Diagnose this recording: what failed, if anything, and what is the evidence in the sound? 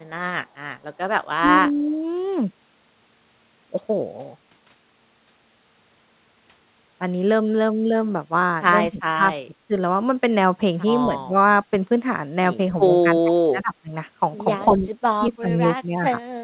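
Speech suppressed in double talk at 1.7, 8.9, 9.45, 11.06, 13.06, 14.66, 15.19 and 15.81 s. The speech ducks in brief pieces, from slight dips to a near-dropout at 13.1–13.9 s. This is a call-processing fault, likely an echo canceller unable to separate the local talker from the far-end echo during overlapping talk and attenuating both.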